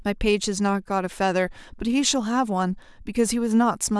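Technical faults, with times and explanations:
No technical faults are audible anywhere in this recording.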